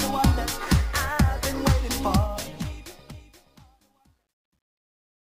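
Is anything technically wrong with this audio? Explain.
Yes. From 2.11 s to the end at 5.28 s, the fade-out shows truncation distortion on a fade. The gain stage keeps too few bits, consistent with about 11-bit resolution, and adds no dither. As the level falls toward the smallest step, the tail turns grainy, and from 3.27 s to the end it is at its worst. On a waveform, the decaying tail becomes staircase-like blocks. A spectrogram shows broadband grit.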